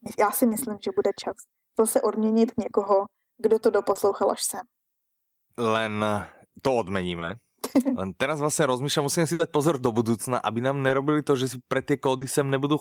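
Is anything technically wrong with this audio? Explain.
Yes. Short concealed packet loss occurs at 0.49, 3.93 (between "kdo to" and "až sem"), 7.19, 10.87 and 12.17 s. About 20 ms of speech (40 ms at 12.17 s) never arrived, and the decoder extended the preceding sound to cover it, leaving a brief smear or wobble.

A burst of packet loss occurs from 9.33 to 9.41 s, just before "pozor do budúcna". About 60 ms went missing in a row. The receiver held the last sound and faded it, so a short buzz or hiss replaces that stretch of speech.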